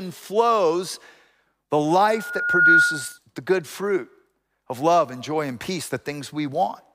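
From 2.09 to 3.18 s a steady 1.4 kHz tone swells over about half a second into a piercing squeal, sitting roughly 10 dB above the speech before cutting off just ahead of "the good fruit of". This is loudspeaker feedback squeal: the microphone re-captured its own loudspeaker until the 1.4 kHz loop gain passed unity and ran away.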